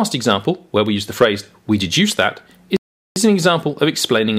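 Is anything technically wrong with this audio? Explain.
Yes. From 2.77 to 3.16 s there is a rebuffering stall: playback ran out of downloaded audio and halted until more arrived, adding 0.40 s of silence. Unlike a dropout, no audio is lost. The sound resumes exactly where it stopped, just later.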